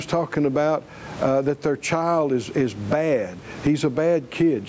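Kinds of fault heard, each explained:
gain pumping: the gain swings by about 15 dB, pulled down on each loud sound, likely from excessive input gain driving a fast limiter.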